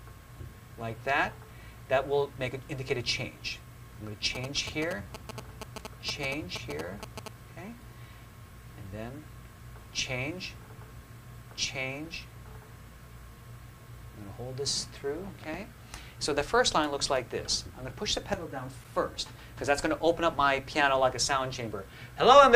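GSM signalling bursts run from 4.35 to 7.28 s. A 2G phone close to the recording chain was exchanging short groups of radio bursts with its network, as happens before a call or text comes in, and the audio circuitry rectified that energy into the signal. The result is a galloping dit-dit-dit of brief buzzes at a 216.7 Hz repetition rate, sitting about 5 dB below the level of the wanted sound.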